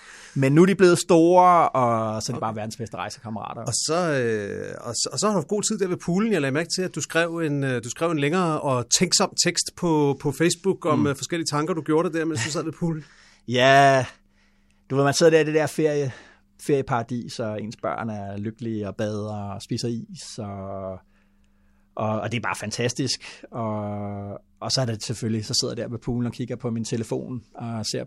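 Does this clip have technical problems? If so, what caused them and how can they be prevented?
No, no technical faults heard.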